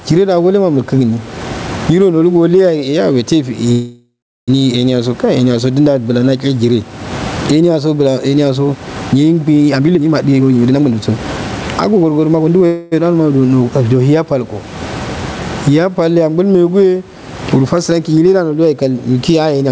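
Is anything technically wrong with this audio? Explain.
Yes, there are three kinds of problems here.

Gain pumping runs through the whole clip. The gain was likely set far too high, so a fast limiter keeps clamping down on every loud syllable. You hear the background swell up in the pauses and duck under the speech, with a swing of roughly 25 dB, and the whole thing sounds squashed.

There are two call audio freezes. The first runs from 3.72 to 4.50 s. Packets were likely held up and the jitter buffer ran dry, so the receiver stretched the last sound into a fading buzz that drops to silence for about 0.37 s. When the packets arrive, the speech picks up where it stopped, roughly 0.76 s late. The second, from 12.66 to 12.94 s, is shorter, about 0.25 s, and never quite goes silent.

There are three jitter buffer speed-ups, where the receiver trims small pitch-period chunks to shed the built-up delay. 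From 9.75 to 11.19 s the speech runs at about 145% speed, losing roughly 0.7 s, and sounds clearly rushed at the same pitch. From 11.89 to 12.63 s it's a milder 111%, about 0.1 s removed. Right at the end, 19.65 to 19.72 s, there's a quick 163% burst.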